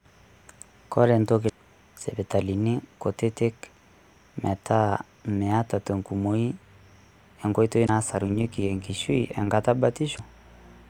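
At 1.45 to 1.50 s there's a short glitch from damaged data in the compressed stream: bad bytes made the decoder lose frame sync and jump ahead to the next header. The same blip returns at 7.85 to 7.89 s. From 8.13 to 9.53 s you get overlap-add ripple. The speech was rebuilt from windowed frames whose overlap doesn't sum flat, so the level pumps by about 6 dB around a hundred times a second, giving a metallic buzz. One last corruption glitch lands at 10.15 to 10.20 s.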